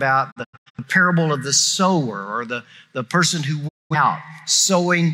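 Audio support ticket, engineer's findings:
Digital broadcast dropout, 0.30–0.79 s: intermittent muting, 256 ms lost in several short holes, longest 85 ms, 20 ms fades. Second dropout 3.67–3.96 s, 213 ms muted. Receiver muting on failed or missing frames. Content during gaps unrecoverable.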